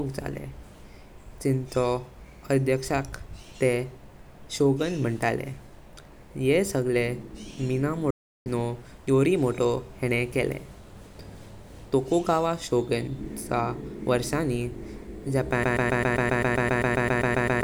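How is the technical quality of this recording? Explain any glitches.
The recording has two clear glitches, a playback stall partway through and a broken-record loop that runs to the end.

From 8.10 to 8.46 s the speech cuts out in mid-flow, leaving about 0.35 s of dead silence before it resumes. That is a playback stall: the player most likely ran dry of data or had its output thread held up, so nothing reached the output until it caught up again.

From 15.64 s to the end, a fragment of about 0.13 s repeats back to back, about fifteen times, giving a stuttering, machine-gun effect. This is a broken-record loop, where a stalled player or stream likely kept resending the last chunk it held. The speech that belonged in those final two seconds never plays.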